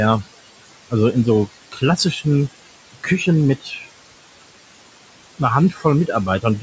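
Noise suppressor artifacts run throughout. The suppressor lowers the bands it judges to be steady room noise, pulling that background down by about 21 dB between words and letting it rise again under the speech. On a spectrogram, the noise floor darkens in the pauses and fills back in around each word. The spectrum stops at 8 kHz, as expected from call microphone processing.

Speech cut by the noise suppressor occurs at 1.72–2.25 s, 2.93–3.27 s, 3.61–3.87 s and 5.71–5.85 s. In each span the suppressor mistook part of the speech for noise and turned it down, by about 15, 17, 16 and 14 dB respectively, over a fraction of a second. These moments sound swallowed. The waveform shows the envelope dipping and the spectrogram shows the speech energy thinning in those spots.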